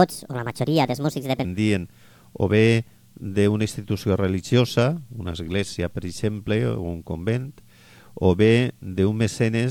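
Right from the start, 0 to about 1.45 s, you get a section at the wrong speed: it runs roughly 1.43 times too fast, so everything comes out hurried and pitched up by something like seven semitones, a bright, chipmunk-ish lift. Because speed and pitch shift together, that opening stretch sounds squeezed. The likely cause is that bit being played or edited against the wrong clock before the audio drops back to its proper rate.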